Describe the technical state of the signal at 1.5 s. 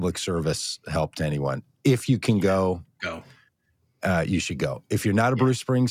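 At 1.5 s the speech signal is intact, with no technical fault present at that moment.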